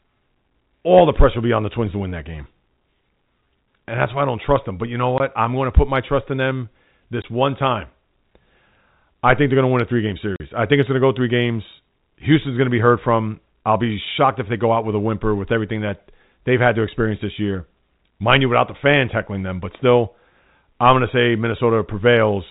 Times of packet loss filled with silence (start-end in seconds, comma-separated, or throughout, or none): 5.18-5.20, 7.22-7.24, 10.36-10.40